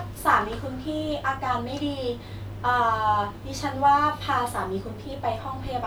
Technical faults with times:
none

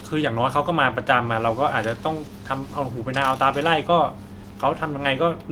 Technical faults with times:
none

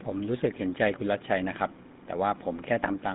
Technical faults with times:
0.00-3.14 GSM full-rate codec

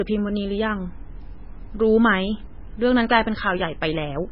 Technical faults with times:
0.00-4.31 low-bitrate audio saved at a high bitrate

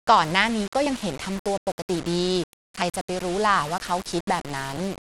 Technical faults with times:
0.00-5.09 low bit depth without dither
0.00-5.09 Bluetooth SBC compression
0.86 audio missing between chunks
2.82 audio missing between chunks
4.77 audio missing between chunks

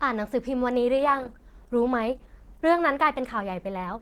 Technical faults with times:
0.97-4.02 adaptive stream at a lower bitrate

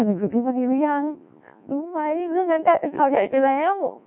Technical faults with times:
0.00-4.06 Codec 2 vocoder

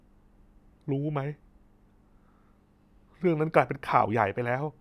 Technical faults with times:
none

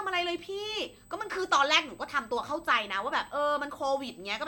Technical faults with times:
0.00-4.47 USB whine

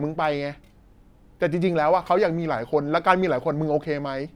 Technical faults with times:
none

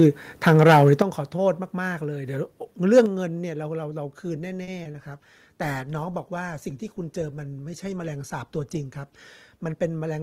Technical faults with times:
0.47-1.02 microphone overload
1.02 microphone volume stepped down
2.96-3.00 microphone overload
3.06 microphone volume stepped down
4.63-4.69 short stall from a late packet
4.83-4.96 short concealed packet loss
4.99-9.75 call bitrate drop
9.57-9.91 jitter buffer speed-up

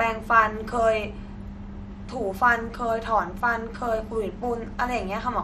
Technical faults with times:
0.00-5.44 MP2 compression

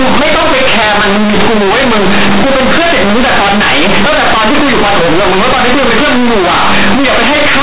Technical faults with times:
0.00-7.63 companded audio read as linear

